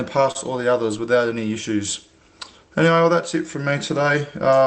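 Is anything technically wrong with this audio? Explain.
Yes. From 0.31 to 0.37 s there is a short stall from a late packet: a packet missed its playout time, the jitter buffer emptied, and the receiver stretched the last sound for about 36 ms before resuming where it stopped. Nothing is lost, but a held sustain with a slight buzz or dip is audible. On a spectrogram the harmonics run flat and repeated there, below the roughly 8 kHz ceiling of the call codec, and the waveform shows a short periodic stretch.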